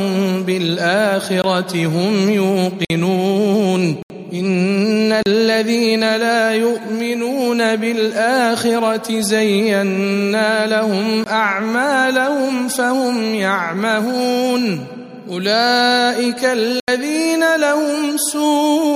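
Blocks of digital silence occur six times: at 1.42–1.44 s (20 ms), 2.85–2.90 s (52 ms), 4.03–4.10 s (75 ms), 5.23–5.26 s (34 ms), 11.24–11.26 s (20 ms) and 16.80–16.88 s (80 ms). In each, the sound cuts out and back with no fade.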